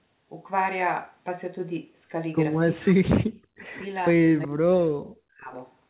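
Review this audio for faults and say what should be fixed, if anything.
Speech suppressed in double talk cuts the speech four times: 2.75–3.09 s, 3.28–3.73 s, 4.16–4.22 s, and the longest from 4.44 to 5.53 s, about a second. Each time the level falls by up to about 40 dB (about 35 dB in the brief third dip), so words thin out or vanish in pieces. This is likely the echo canceller treating overlapping talk as echo and attenuating everything. On a waveform the envelope collapses in those spans, and a spectrogram shows blank or ragged gaps across the band below 4 kHz. Preventing it means tuning the canceller's double-talk detection so near-end speech is kept when both sides talk.

An echo leak appears at 4.42–4.47 s as a short, faint scrap of earlier speech repeated about 370 ms late, roughly 20 dB below the main speech. It likely comes from a loudspeaker whose echo canceller let residual pickup slip back into the call. 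On a spectrogram it looks like a pale copy of an earlier harmonic pattern shifted in time, and on the waveform it is a small burst. Improving echo-path adaptation or residual echo suppression on the loudspeaker side would stop it.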